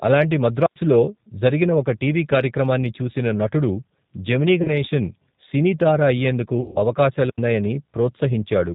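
Speech throughout passes through the G.729 codec at 8 kbit/s, which discards everything above 4 kHz and rebuilds the voice from a filter and sparse pulses, so it sounds narrow, rough and plainly synthetic. VoIP packet loss concealed by the speech codec strikes twice. From 4.62 to 4.70 s, 30 ms of audio is missing, which fits a single lost packet. From 6.61 to 6.80 s, 150 ms is missing, which points to several consecutive losses. In each gap the decoder stretches its last pitch and filter into a fading buzzy tone or coloured noise, and the voice stays weak briefly afterwards.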